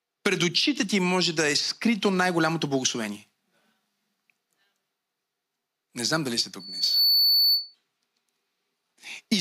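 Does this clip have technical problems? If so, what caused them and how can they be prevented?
Yes. Just after "знам дали сте", at 6.59 s, loudspeaker feedback squeal sets in and lasts until 7.75 s: a single tone near 4.5 kHz swells over roughly 0.4 s and ends up a few dB above the speech. On a spectrogram it appears as a bright horizontal line at 4.5 kHz that thickens and brightens, and the waveform envelope bulges into a steady, dense block. It happens because the microphone picks up the loudspeaker it feeds, and the loop gain at that frequency rises above one, so the tone keeps reinforcing itself. To prevent it, lower the monitor gain, move the microphone away from or behind the loudspeaker, or notch out 4.5 kHz with a feedback suppressor.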